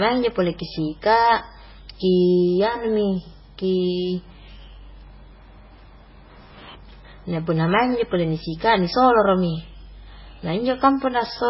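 Throughout the recording, the speech was likely squeezed through MP3 compression at a very low bitrate, with heavy damage that fits roughly 16 kbps. Starved of bits, the encoder discarded everything above about 5.6 kHz and zeroed weaker frequency lines, letting them flicker in and out between frames. The result is dull, band-limited speech with a watery, swirling texture, metallic chirping on s sounds, and softened, smeared consonant attacks.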